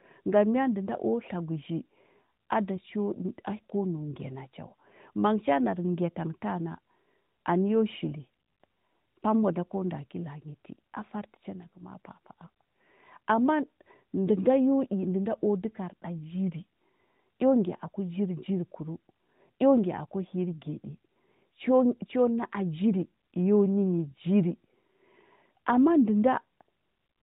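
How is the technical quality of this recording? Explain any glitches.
Nothing stood out as a glitch on listening; the narrowband, phone-line character of the AMR narrowband mobile codec can be heard, but it shows only light codec damage here.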